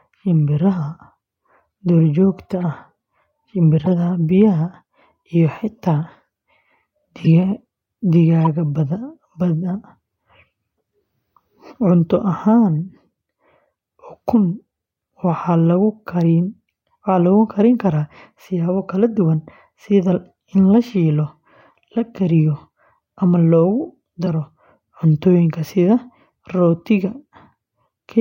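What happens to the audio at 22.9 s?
Nothing goes wrong at 22.9 s: the speech plays through that moment intact, with no dropout, click, distortion or other audible fault.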